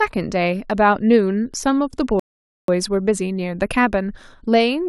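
At about 2.20 s the speech just stops dead and there's silence until roughly 2.68 s, and then it picks up exactly where it left off, with nothing skipped. That's a rebuffering stall: the player ran dry of downloaded audio, had to sit and wait for more data to arrive, then carried on. So you lose none of the speech, but you get close to half a second of dead air added.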